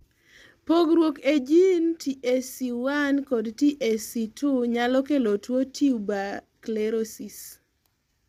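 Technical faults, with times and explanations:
throughout, low-delay AAC compression: likely AAC-ELD at a rate that sounds near 32 kbps; its short frames blur pitch harmonics, leaving the speech rough and grainy.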